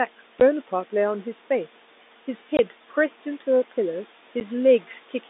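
Hard-edged holes of silence cut the speech at 0.40 s, 2.57 to 2.59 s and 4.40 s. This is packet loss filled with silence, with gap lengths that fit 10 ms packets.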